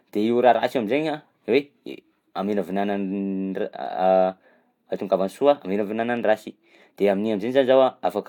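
Nothing stood out as a technical problem when listening to this speech recording.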